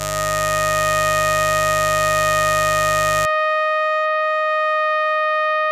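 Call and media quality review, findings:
Steady raspy mains buzz under the music, 0.0 to 3.26 s, roughly 10 dB below programme. 50 Hz switching spikes from dimmer, rectifier or unshielded cable, harmonics into kHz.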